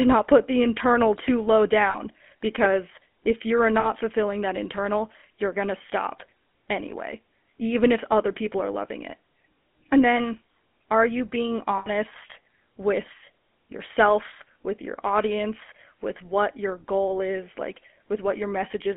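The whole speech clip carries GSM full-rate codec damage, and it is plainly audible. The voice sits in a narrow line band of 200 Hz to 3.4 kHz. A pulse-driven vocal-tract model gives it a buzzy, gravelly roughness, which fits a 13 kbps rate.

Lost GSM frames interrupt it three times. At 1.9 to 1.99 s, after "the internal too low", about 40 ms is held. At 3.8 to 3.91 s, after "because if you're", another 40 ms goes. At 11.78 to 11.89 s, after "then are you being", it lasts 80 ms. Each gap repeats the last good settings, which gives a brief metallic ring.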